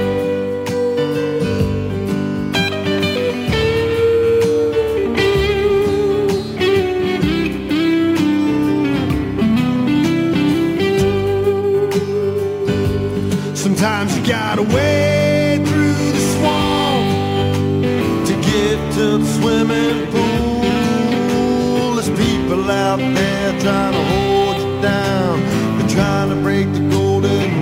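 From start to finish the clip carries crude rate conversion. The sound seems to have been moved between rates by simply repeating the nearest sample rather than filtering, and the pattern of the error fits a jump from 44.1 kHz to 48 kHz. Those stepwise repeats leave a gritty, inharmonic fizz riding along with the louder and brighter moments, sitting roughly 30 dB under the signal itself.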